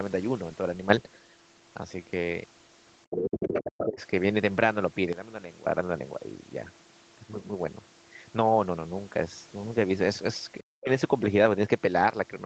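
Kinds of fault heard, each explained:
Sudden gain jump: Level leaps about 9 dB up near 0.9 s, then about 14 dB down near 5.1 s. Voice and background shift together, likely from an unramped gain change.
Speech suppressed in double talk: The talker dips by roughly 30 dB around 3.1 to 4.0 s, and nearly vanishes near 10.6 s. The likely cause is an echo canceller ducking everything during overlap.
Other side's voice leaking through: A second voice intrudes from 3.1 to 3.6 s and briefly at 3.8 s, only a few dB below the talker. Loudspeaker echo likely escaped cancellation.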